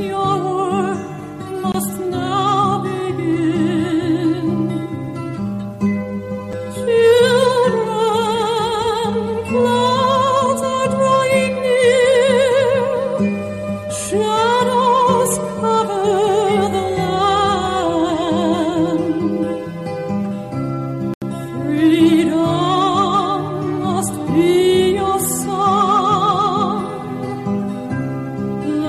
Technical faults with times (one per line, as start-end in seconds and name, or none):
1.72-1.74 Bluetooth stall
6.53 Bluetooth stall
21.14-21.22 Bluetooth stall